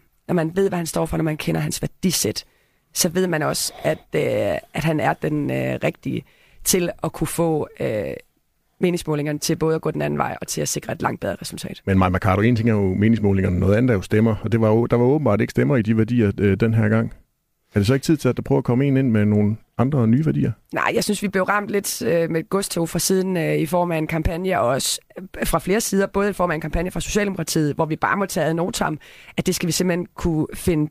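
Adaptive stream starting at a low bitrate, from 0.0 to 2.0 s of this speech: the opening has thin, synthetic treble and heavier codec artefacts, which fits 32 kbit/s HE-AAC. It then improves abruptly, with no gap, to quality that fits 96 kbit/s AAC-LC once the player has measured the connection.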